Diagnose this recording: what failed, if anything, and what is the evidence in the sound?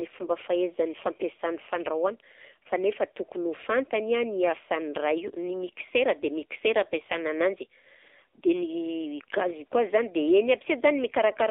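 The whole recording has passed through the AMR narrowband mobile codec. The speech is confined to roughly 300 Hz to 3.6 kHz, with nothing above 4 kHz, and it has a plainly audible buzzy, synthetic edge. The coarseness points to a low-rate mode, about what the 7.4 kbps mode would give. On a spectrogram, energy ends at a hard ceiling near 4 kHz, and the harmonics look smeared and grainy.

A lost AMR speech frame, in the network and radio stage, causes a brief dip and warble from 8.36 to 8.40 s. The decoder filled the gap by repeating the last good pitch and vocal-tract settings at reduced gain, then resumed with slightly rough sound. The length fits a single dropped 20 ms frame. On the waveform, the envelope sags briefly there. On a spectrogram, a short stretch of frozen, faded harmonics appears.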